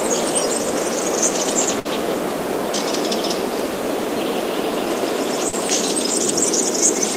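A short recording of everyday sound has two packet-loss faults. At 1.79 to 1.88 s there is a burst of packet loss. About 40 ms of audio never arrived, and the receiver covered the hole by extending the last sound for roughly 53 ms while turning it down, so it decays into a fading hiss or held buzz before playback jumps ahead. On a spectrogram this looks like a smeared, darkening band that continues the preceding frame's pattern and then breaks sharply into unrelated content. The waveform shows a tapering envelope before an abrupt resumption.

At 5.49 to 5.55 s, short concealed packet loss removed about 40 ms. The decoder synthesised roughly 37 ms from the preceding sound and cross-faded back into the real signal, so the result is a brief smear or wobble rather than a clear gap. On a spectrogram it appears as a short blurred patch where fine detail goes soft. The waveform shows a slightly flattened, oddly smooth stretch with no silent dropout.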